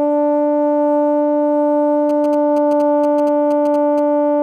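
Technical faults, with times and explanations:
2.09–4.00 s: GSM signalling bursts, a galloping run of ticks and short buzzes near 217 Hz, well below the music, from a nearby phone signalling. Unlike steady mains hum, it arrives in clustered bursts.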